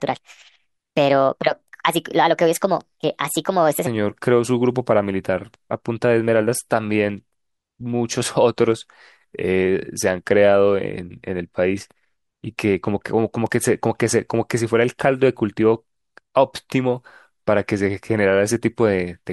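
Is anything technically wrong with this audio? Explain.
Yes. From 0 to 3.87 s there is a wrong sample rate fault: the speech runs 1.38 times fast and about 5.5 semitones high, which fits 32 kHz audio played at 44.1 kHz without conversion.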